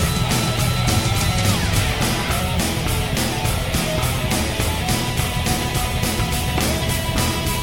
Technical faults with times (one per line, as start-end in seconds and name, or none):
none